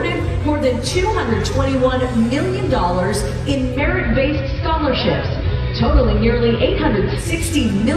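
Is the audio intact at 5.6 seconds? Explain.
No. At 5.6 s the radio is partway through digital radio blending to analogue, which runs from 3.68 to 7.32 s. Having lost the digital stream, the receiver cross-fades over 146 ms to the station's AM broadcast. The sound turns dull and gains a faint hiss roughly 40 dB down. On a spectrogram, the upper treble thins out over a steady noise floor. The waveform shifts level by about 1 dB.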